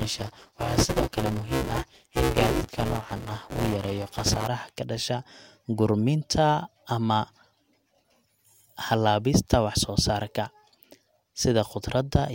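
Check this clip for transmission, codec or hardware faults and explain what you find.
There's one fault here: buffer tearing over the first 4.48 s of the speech, clearing up just before "ka dhasha". The app writing the ring buffer and the hardware reading it have drifted, so they cross mid-period every time. About half of each buffer ends up holding stale audio from roughly 10 ms earlier, with hard joins on both sides. That gives a robotic 200 Hz buzz riding on the speech, which fits a 5 ms buffer period.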